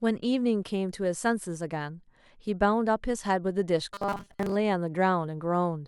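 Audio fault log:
3.94–4.56 s, robotic sound from repeated short buffers: the speech turns into a rigid metallic buzz at 200 Hz, likely because audio arrived too seldom and a 5 ms slice replaced most of the real signal. Unlike a dropout, there are no gaps, and the buzz loosely follows the speech.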